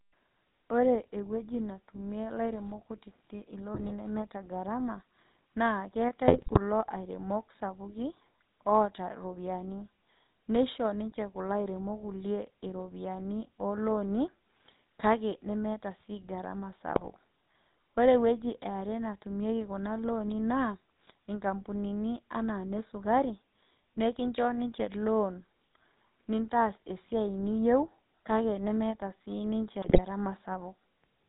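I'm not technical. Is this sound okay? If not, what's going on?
No. The whole recording went through the GSM full-rate codec, an early mobile-phone voice system. It throws away everything above 4 kHz and rebuilds the voice from a rough model. That gives the speech a buzzy, gravelly roughness you can hear throughout.

There are also GSM bit errors. Damaged data reached the decoder, so short stretches turn into squawks, pops and gargling. They happen at 3.74 to 3.91 s, between "ewueji natumie ilairemok kutitik" and "nemeeta garama", then at 6.28 to 6.58 s, 16.96 to 17.08 s, and 29.82 to 30.01 s, right after "niyieu kake nemeeta siniche".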